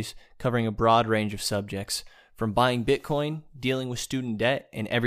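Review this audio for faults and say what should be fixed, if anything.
No faults turn up in this audio, so nothing needs to be fixed.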